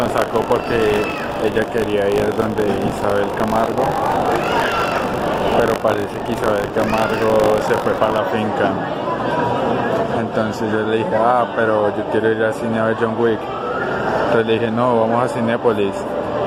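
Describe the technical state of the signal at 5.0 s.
At 5.0 s the sound carries a steady robotic rattle, a buzz at 50 Hz that sits on top of whatever is playing and runs from the start of the clip to 8.18 s. This is buffer tearing. The writing program and the playback hardware have slipped against each other on a ring buffer. In each 20 ms period, about a tenth of the audio is stale material from roughly 40 ms earlier, spliced in with hard joins on both sides.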